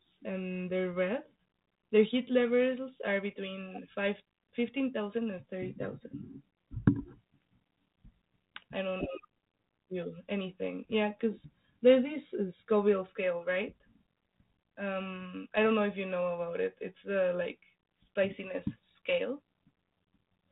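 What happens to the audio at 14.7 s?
Nothing goes wrong at 14.7 s: the speech continues intact through that moment, carried by 32 kbit/s G.726 ADPCM with its light narrowband coding texture.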